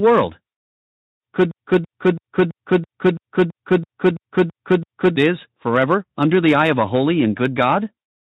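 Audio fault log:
1.51–5.17 s, broken-record loop: a 0.33 s fragment repeats exactly, back to back, eleven times, then the audio resumes at "is forever under the". The likely cause is a stalled player or stream resending its last held fragment, so the audio meant for that stretch is lost.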